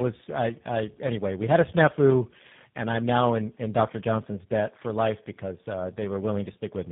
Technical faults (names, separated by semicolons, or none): tandem speech coding